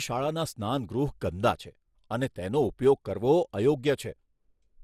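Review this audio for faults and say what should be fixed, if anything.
Throughout the speech there is a swirly, hollow smear, with consonant attacks blurred and nothing above 16 kHz. This is generation loss, likely from the audio being decoded and re-encoded around five times with a lossy codec whose character fits MP2 at about 96 kbit/s. Each pass quantised again on a shifted frame grid, so the noise stacked up. To prevent it, keep a lossless master and encode to the lossy format only once, at the final step.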